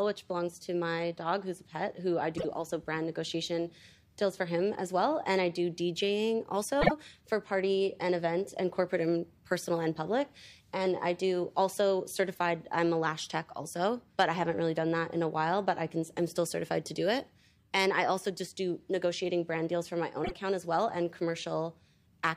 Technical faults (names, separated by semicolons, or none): repeated frames